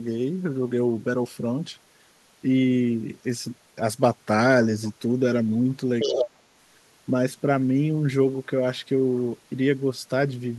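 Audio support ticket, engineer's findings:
Other side's voice leaking through, 6.0–6.24 s: second talker at roughly equal level to near-end speech, likely residual loudspeaker echo missed by the echo canceller. Spectrogram shows an overlapping, separate harmonic stack.

Speech suppressed in double talk, 6.05–6.45 s: near-end speech drops roughly 35 dB for about 0.4 s, likely echo canceller attenuating both talkers. Waveform shows a deep envelope notch.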